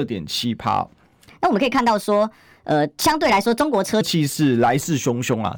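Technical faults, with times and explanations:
Throughout, hard clipping: the speech is pushed about 3 dB past what the chain can pass, so a small fraction of the loudest peaks get sliced flat. Those squared-off tops throw extra high harmonics, which you hear as a gritty crackle riding the louder syllables.
1.27 to 4.01 s, section at the wrong speed: this stretch runs 1.29 times too fast, so pitch jumps up about four semitones and the delivery sounds rushed and chirpy. Speed and pitch shifting together like that is likely from playback or an edit locked to the wrong clock.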